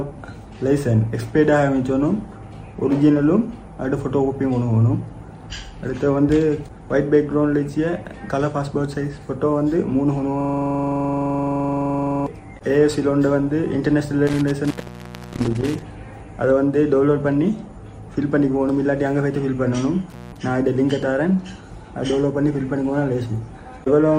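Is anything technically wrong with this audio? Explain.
Yes. From 10.41 to 12.26 s there is a system hang loop: the machine or its driver stalled while the audio hardware kept replaying the same stretch of its ring buffer. A 42.67 ms slice, which fits a 2048-sample buffer, repeats exactly about 44 times at 23.4 Hz, giving a rapid mechanical rattle. Unlike a dropout, the sound never goes silent; it is the same fragment, identical each pass.

Intermittent contact breaks the signal at 14.27 to 15.82 s, with the line open for 683.12 ms, and again at 20.10 to 20.37 s, open for 177.69 ms. A loose plug or cable momentarily loses connection, so the audio vanishes with crackle at each edge and only faint hiss remains while it is open. What separates this from the hang loop is the gap itself: nothing repeats.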